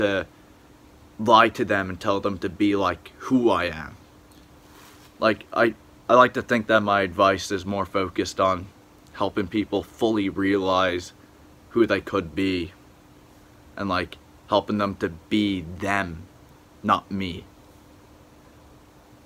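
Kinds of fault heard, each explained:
No technical fault can be heard anywhere in the audio. There is nothing here to list or explain.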